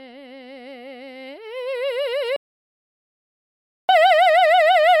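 A music clip with an audio dropout to silence from 2.36 s to 3.89 s, losing about 1.53 s. The sound cuts off mid-flow and returns abruptly, likely from the input briefly failing while silence was written. The waveform shows a flat line and the spectrogram a fully black band, with no room tone.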